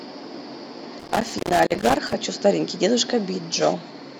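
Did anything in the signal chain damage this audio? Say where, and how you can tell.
Yes. The damage sits in the analogue wiring: a loose connector crackle runs from about 1.00 to 2.14 s of this speech clip. A worn or dirty contact was making and breaking as it shifted, so the signal was chopped into fragments and any DC on the line turned into pops. On the waveform this shows as ragged dropouts and sharp spikes scattered unevenly; on a spectrogram, as irregular broadband vertical streaks across the whole frequency range.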